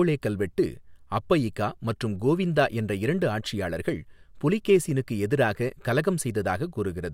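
No technical faults occur in the recording, so there is nothing to describe in time order.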